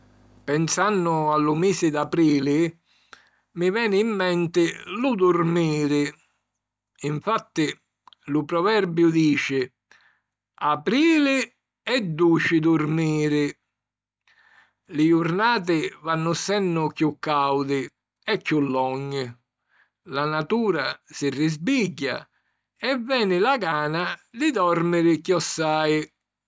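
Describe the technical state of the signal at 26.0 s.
At 26.0 s the speech signal is intact, with no technical fault audible at that point.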